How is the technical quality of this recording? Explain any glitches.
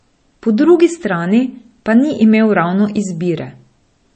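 The recording has plainly audible codec damage throughout. MP3 compression, present from start to finish, is the likely cause: short of bits, the encoder has removed everything above 8.3 kHz and dropped weak frequency lines that flicker between frames. The speech sounds dull, watery and swirly, with metallic chirps on s sounds, which fits a low bitrate around 32 kbps.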